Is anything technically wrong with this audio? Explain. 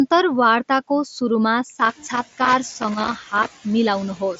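Yes, two faults can be heard in this speech.

Noise suppressor artifacts run through the whole clip. The suppressor cuts the background by about 10 dB in the gaps and lets it back up under the speech, so it rises and falls with each phrase.

Loose connector crackle runs from 1.72 to 3.51 s. A worn or dirty contact keeps making and breaking as it shifts, chopping the signal. The result is an irregular stretch of scratchy crackle over the speech. Around 2 s the room noise also climbs by about 13 dB, which gives the suppressor more to fight. The audio sounds band-limited to about 7.7 kHz, which fits the mSBC Bluetooth headset codec.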